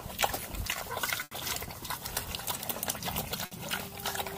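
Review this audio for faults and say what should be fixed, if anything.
Two bursts of packet loss break the audio, at 1.23 to 1.33 s and at 3.45 to 3.53 s. In each, a run of packets never arrived in time. The receiver stretches the last sound it had and lets it fade, for about 80 ms in the first gap and 60 ms in the second. Then the audio picks up later, and the stretch in between is gone. A larger jitter buffer with forward error correction would prevent this.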